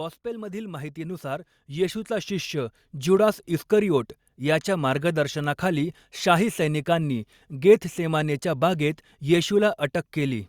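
From 0.22 s to 3.43 s the speech swells steadily louder. This is automatic gain rising. The gain control judged the input too quiet and pushed its gain up by about 14 dB over roughly three seconds. Because it amplifies everything, the room background climbs along with the voice. Noise and speech grow together, not the voice alone. The ramp settles just before "इस्करिओट याच्या मार्गदर्शनाखाली शाही".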